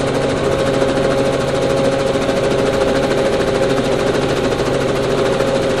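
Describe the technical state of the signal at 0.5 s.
The signal at 0.5 s is intact, with no fault to be heard at that moment.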